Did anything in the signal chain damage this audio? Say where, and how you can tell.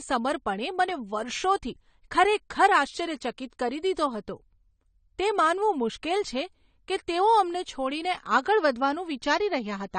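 Yes, at the codec stage, and it runs through the whole speech clip. Nothing sounds past 9 kHz, sibilants go fizzy and smeared, and sustained sounds warble. That's likely AAC compression, AAC-LC starved of bits, which fits a bitrate around 32 kbps.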